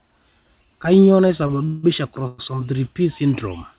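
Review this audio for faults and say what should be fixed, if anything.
At 1.47 to 1.51 s, a sound in the speech is held a touch too long, with a faint buzzy smear. This is a short stall from a late packet: the jitter buffer emptied, the receiver stretched about 21 ms of the last sound, then resumed exactly where it stopped, losing nothing.

From 1.65 to 1.85 s and again from 2.27 to 2.40 s, the speech halts and a fading buzzy hiss fills the pause before it picks up where it stopped. These are call audio freezes, likely from packets held up in transit. The receiver padded about 178 ms and 112 ms, never dropping to silence, so pauses were inserted but nothing was lost.

To prevent both, the network delay variation should be reduced, for example with traffic prioritisation, or the jitter buffer should be allowed to adapt to a deeper target depth.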